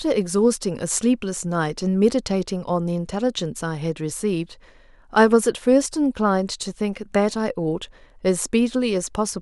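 No technical faults are audible anywhere in this speech.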